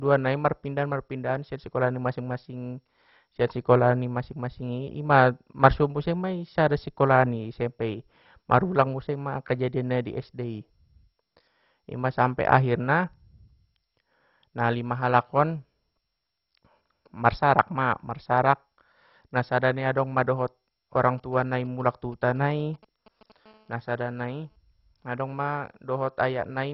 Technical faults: MP2 compression; GSM signalling bursts; GSM phone buzz

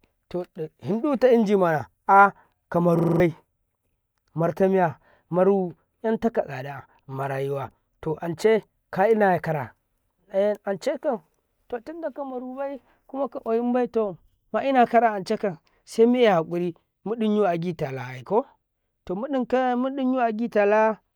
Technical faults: system hang loop

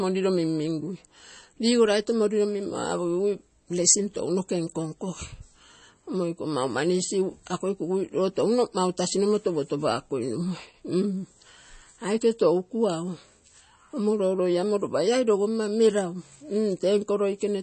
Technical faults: MP3 compression

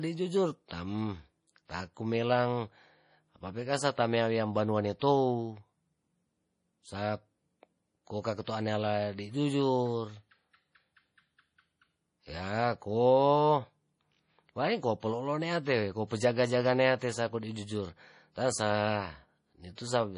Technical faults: MP3 compression; pre-echo

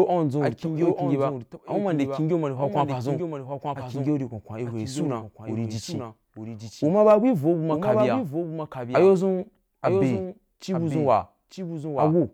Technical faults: doubled audio track

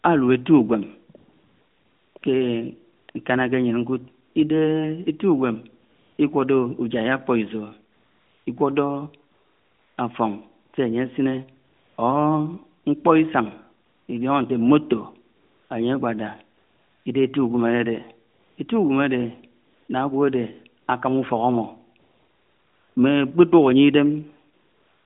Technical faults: AMR comfort noise

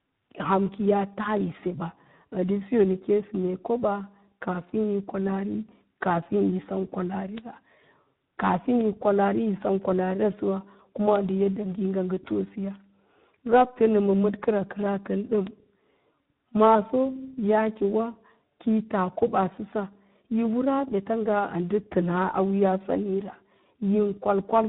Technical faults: tandem speech coding; bit error spike

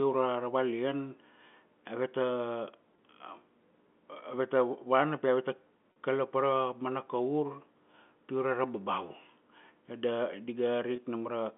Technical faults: packet loss with pitch repetition

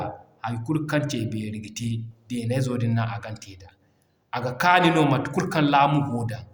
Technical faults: none

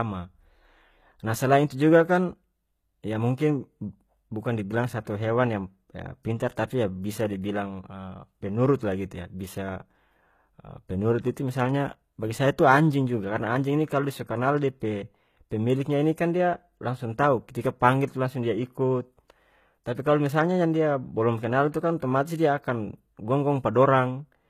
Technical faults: HE-AAC compression

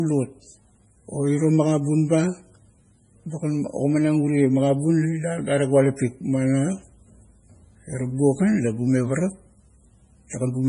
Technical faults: MP3 compression

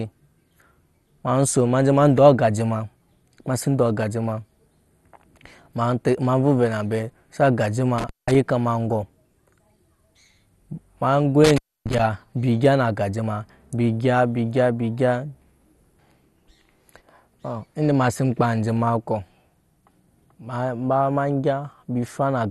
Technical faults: MP2 compression; intermittent contact

